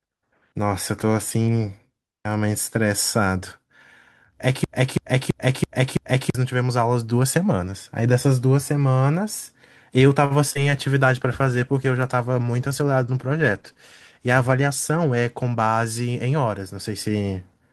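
From 4.64 to 6.35 s, the player or stream likely stalled and kept resending the last fragment it held. This is a broken-record loop: a 0.33 s slice of speech repeats exactly, back to back, five times. The speech that belonged in that stretch is simply gone.

At 10.25 s a packet arrived late and the jitter buffer ran dry. The receiver stretched the last sound for 50 ms until the packet turned up, then carried on from the same point, adding 50 ms of delay. This short stall from a late packet drops nothing but holds one sound too long.

Just after, two stretches of short concealed packet loss follow. At 10.50 s a 20 ms piece never reached the decoder, and from 10.53 to 10.72 s another 20 ms went missing. Each time the receiver continued the preceding sound to fill the gap, and the second patch ran about 20 ms longer. Both come across as a brief smear or wobble.

From 11.05 to 16.75 s the call's bandwidth estimate fell, and the encoder was pushed from 48 kbps down to 16 kbps. 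It stayed at its lowest for about 3.7 s. This call bitrate drop makes the speech coarser and duller, with a rough, watery edge, until the rate climbs back.

Within that stretch, from 14.31 to 14.90 s, the jitter buffer held more audio than its target. The receiver trimmed repeated pitch-period-sized pieces, removing around 70 ms in total. In this jitter buffer speed-up the speech runs at 109% speed with unchanged pitch, so it sounds hurried.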